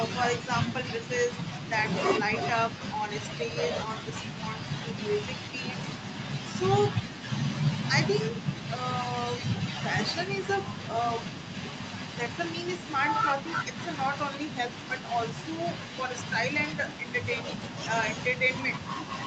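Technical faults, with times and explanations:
No technical faults in the speech; the call microphone processing and WebRTC call path leave nothing above 8 kHz, which is as expected for that chain.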